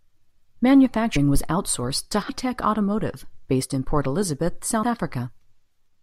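Compressed frames skipped at 1.15 s, 2.28 s and 4.82 s: each time, whole frames of the encoded speech never reach the output, so the audio lurches forward by a multiple of the 21.3 ms frame length. Roughly 100 ms vanishes at the first jump, about 150 ms at the second and around 70 ms at the third.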